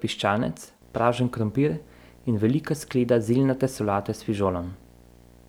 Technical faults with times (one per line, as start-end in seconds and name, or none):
0.82-5.49 video or display buzz